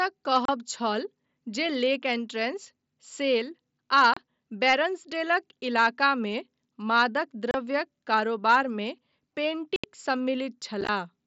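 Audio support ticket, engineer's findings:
Abrupt silent holes: 30 ms at 0.45, 4.14 and 7.51 s; 75 ms at 9.76 s; chopped stretch 10.81–10.89 s. Unconcealed Bluetooth headset packet loss: lost mSBC voice frames replaced by silence.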